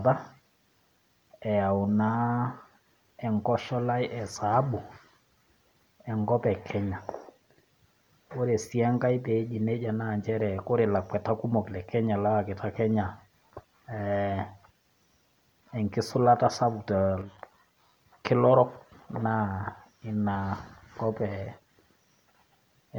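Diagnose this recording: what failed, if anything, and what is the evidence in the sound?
The one thing that went wrong is a brief drop in level from 17.22 to 17.38 s, only about 0.17 s long. The speech suddenly sits about 6 dB lower, then snaps back. That exact step is the signature of one channel dropping out ahead of a mono fold-down: with one side gone, the summed signal loses half its amplitude. The likely culprit is the analogue stage, such as a loose connector or intermittent cable on one leg.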